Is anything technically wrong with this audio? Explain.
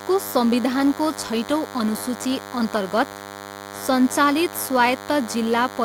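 Yes. Throughout the speech, a steady, thin, harsh buzz sits well below the voice, about 15 dB down. This is DECT cordless phone buzz: a nearby handset or base transmits a radio burst every 10 ms, and the audio circuitry rectifies it into a 100 Hz tone rich in harmonics.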